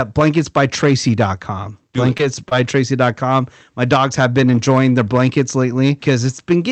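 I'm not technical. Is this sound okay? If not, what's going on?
No. This speech has hard clipping from start to finish. The recording is too loud for one stage in the chain, so the loudest moments get their tops sliced flat. A small share of the audio is affected, heard as a rough, crackly edge on the louder syllables.

There are also two spots of short concealed packet loss, at 2.17 to 2.21 s and 2.49 to 2.53 s. Small chunks of the call arrived too late, and the receiver patched each gap of about 20 ms by stretching the preceding sound, heard as a brief smear or wobble.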